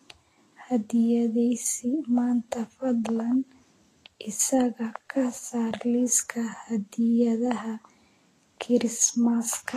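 Heavy lossy encoding, likely Vorbis compression at a low bitrate around 34 kbps, runs through the whole speech clip: the treble is cut off early and coarsely quantised, so high detail turns into grainy hiss, tones sound roughened and consonant attacks are smeared.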